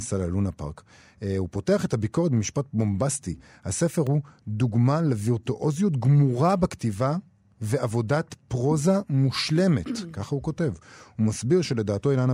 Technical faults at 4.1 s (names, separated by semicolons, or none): block of digital silence